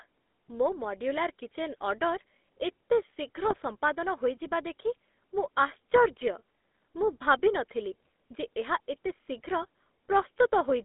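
A GSM full-rate codec carries this speech recording from start to finish, modelling the vocal tract and feeding it a sparse, regularly pulsed excitation, which fits the 13 kbps full-rate coder. Only about 250 Hz to 3.6 kHz gets through, so the voice is thin and telephone-narrow, with a plainly audible buzzy, gravelly grain over every syllable. On top of that come GSM bit errors, where corrupted bits reached the decoder and scrambled its filter, pitch and gain values for a few frames. The first hit runs from 3.48 to 3.57 s, between "ଏତେ ଶୀଘ୍ର" and "ସମ୍ପାଦନ ହୋଇଯିବା ଦେଖି", where the speech breaks into a brief squawking, gargled burst. The second, from 8.03 to 8.06 s just after "ଭାବି ନଥିଲି", is a shorter pop-like garble. Each sounds consistent with roughly four damaged frames on a link flipping about 1% of its bits.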